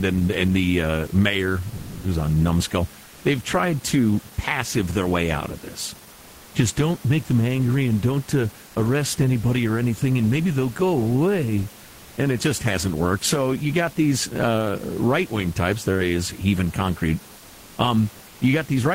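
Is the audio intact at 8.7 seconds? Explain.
No. From 8.67 to 8.75 s, an 80 ms stretch between "angry and don't uh" and "arrest anybody or anything", the room background is replaced by comfort noise. During the pause the sender stops transmitting, and the receiver fills the gap with a smooth, featureless synthetic hiss, likely from Opus DTX. The genuine room noise, about 27 dB below the loud passages, loses its texture and drops by about 2 dB until the audio resumes.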